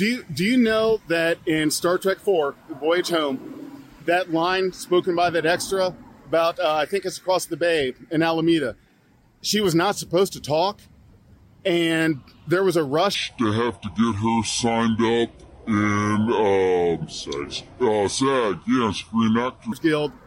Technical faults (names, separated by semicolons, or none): section at the wrong speed